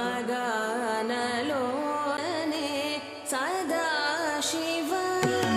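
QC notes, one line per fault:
2.17 s, CD skip: there's a tiny tick and a dropout of roughly 10 ms, and then the audio picks up from a different spot instead of continuing where it left off. That's the classic sign of the laser getting knocked or tripping on a flaw and landing on another turn of the disc's spiral. The player briefly mutes while it re-locks, so you get that click-plus-jump rather than a smooth gap.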